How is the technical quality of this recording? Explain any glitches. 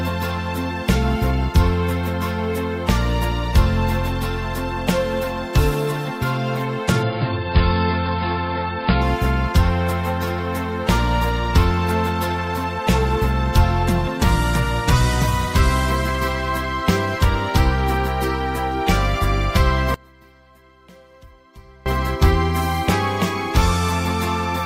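The recording has two glitches.

From 7.02 to 9.02 s the sound suddenly turns dull and watery, with nothing above 5.2 kHz, then snaps back with no gap. This is an adaptive stream at a lower bitrate. A slowed connection made the player fetch a much leaner AAC version, which fits a drop to around 16 kbit/s.

From 19.94 to 21.86 s the sound nearly disappears, falling by about 28 dB and leaving only a faint residue. The likely cause is one channel inverted: with one stereo side's polarity flipped, the shared content cancels when the two channels are summed to mono.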